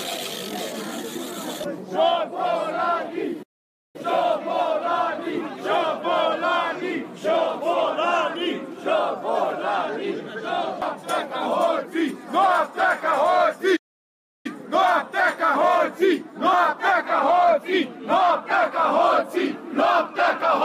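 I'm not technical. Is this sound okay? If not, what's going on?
No. There are two playback stalls, one at about 3.42 s and another at about 13.76 s. The sound stops dead partway through, goes silent for roughly half a second the first time and about 0.68 s the second time, then picks up again. The likely cause is that the player briefly ran out of audio to play, or got held up doing something else, so nothing reached the speakers until it caught up.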